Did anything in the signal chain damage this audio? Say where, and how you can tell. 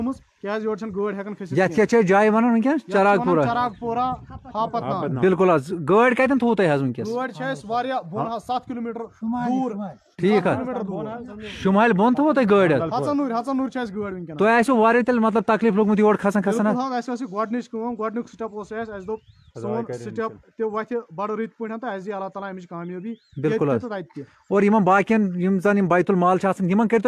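No, nothing along the chain has left an audible mark: level, continuity and timing hold steady throughout, with no stage betraying itself in the signal.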